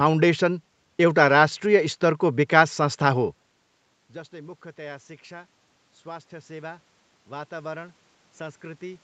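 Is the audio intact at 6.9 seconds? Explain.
No. At 6.9 s the automatic gain rising is under way, running from 4.3 s to the end. After the input fell by about 21 dB, the gain control keeps lifting its gain, so voice and room noise swell together.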